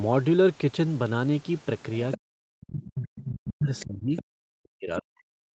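At 2.11 to 2.17 s a second voice slips in underneath the speech, about 10 dB below it: the other side's voice leaking through, likely because the loudspeaker output reached the microphone and the echo canceller left part of it in. From 2.16 to 4.16 s the talker's own speech falls away by as much as around 40 dB. This is speech suppressed in double talk, likely the canceller turning everything down when both sides overlap. Unlike plain echo, the main voice itself sinks rather than gaining an extra layer. Within that dip, further short leaked scraps surface at 2.83 to 3.02, 3.22 to 3.31 and 3.76 to 3.84 s, the last quieter, about 20 dB under the speech. Another appears at 4.16 to 4.24 s, about 15 dB down. The same suppression returns from 4.57 s to the end, again reaching around 40 dB, with one more brief leaked fragment at 4.97 to 5.01 s. These fragments sound like a separate voice underneath, while the suppression takes away the talker's own voice.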